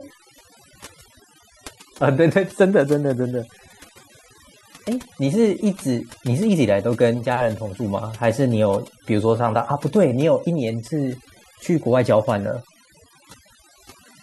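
Speech, treated with overdone noise removal across the whole recording: a noise reduction stage was pushed far too hard on a noisy source, so any frequency band sitting close to its noise estimate gets pulled down or cut entirely, taking the softer parts of the voice along with the noise. The background drops and breaks up into twinkling, chirpy specks.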